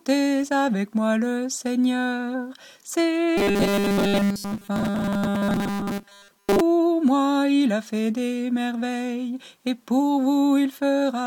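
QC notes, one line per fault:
3.38–6.61 s, robotic sound from repeated short buffers: a rigid 200 Hz buzz, likely from a 5 ms stretch looped repeatedly while most incoming audio is skipped.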